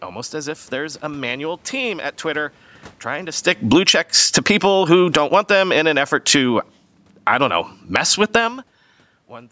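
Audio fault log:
3.46–5.84 s and 6.72–8.23 s, automatic gain falling: right after "trying to", the level sinks by about 15 dB over roughly 2.4 s, then by about 5 dB more from 6.72 s. The gain control judged the input too loud and turned itself down gradually, so voice and room noise fade together.
3.96–6.76 s and 7.34–8.65 s, automatic gain rising: the control swings back, lifting gain by about 5 dB over almost 3 s, then by about 4 dB as the input drops some 23 dB when the talker moves away near 8.5 s. Voice and background swell together, each rise lasting more than a second.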